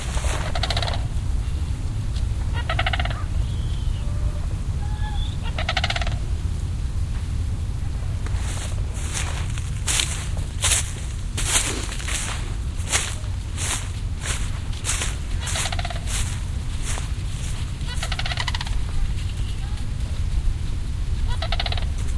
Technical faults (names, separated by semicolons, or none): none